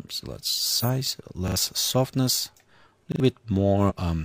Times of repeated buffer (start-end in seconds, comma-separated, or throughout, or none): 1.48-1.56, 3.12-3.20